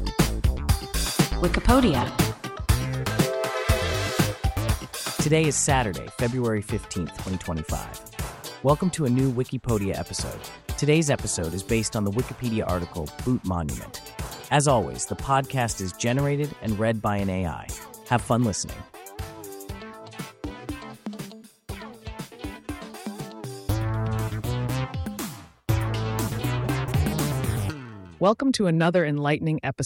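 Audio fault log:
No technical faults detected anywhere in the audio.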